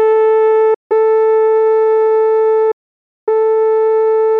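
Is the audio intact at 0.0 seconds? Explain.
Yes, the music plays cleanly at 0.0 seconds, with no dropout, click or distortion at that moment.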